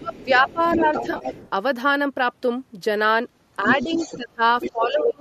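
From 0.0 to 0.86 s, the speech dips by up to about 15 dB. This is speech suppressed in double talk. The likely cause is both sides talking at once, so the echo canceller turned down the near voice along with the echo.

From 0.06 to 1.5 s, a second voice sits only a few decibels below the main speech. This is the other side's voice leaking through. The echo canceller likely left part of the loudspeaker signal in the microphone.

From 1.11 to 1.25 s comes AAC frame loss with concealment. About 80 ms went missing, scattered over 100 ms. The longest gap is around 40 ms. The decoder patched these gaps from earlier spectrum, so the sound turns briefly smeared and noisy.

The leak returns from 3.65 to 4.17 s and from 4.6 to 4.87 s, the second time about 10 dB down. Suppression returns at 3.83 to 3.99 s as a slight dip. It returns at 4.16 to 4.41 s and from 4.73 s to the end as deep drops of about 20 dB.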